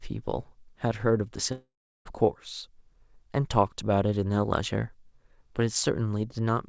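From 1.52 to 2.07 s the speech decays into a fading buzz, then silence, likely a long network dropout; unlike brief packet loss, a whole chunk vanishes.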